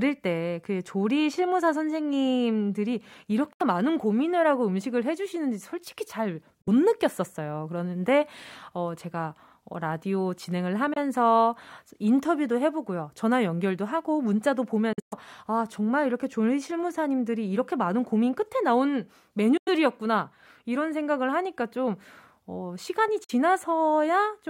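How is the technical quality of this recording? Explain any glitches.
The recording has six short holes in the speech, a Bluetooth dropout each time. At 3.53–3.62 s, 6.62–6.68, 10.93–10.97, 14.93–15.14 (choppiest, about 160 ms gone, longest gap about 120 ms), 19.57–19.69 and 23.24–23.31, the sound cuts abruptly to silence, then picks up further along. That likely comes from packets missing the headphones' deadline and getting dropped. The roughly 23 ms steps in gap length fit whole lost frames.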